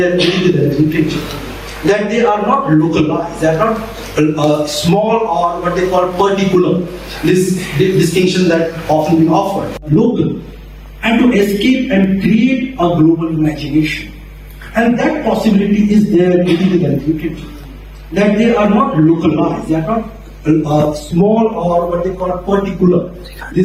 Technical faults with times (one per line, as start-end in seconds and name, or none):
0.00-23.65 mains hum
0.00-23.65 gain pumping